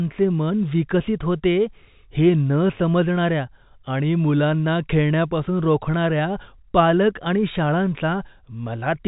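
Nothing stood out on listening to this speech, which has the narrow telephone-band sound of G.711 coding with nothing above about 3.8 kHz.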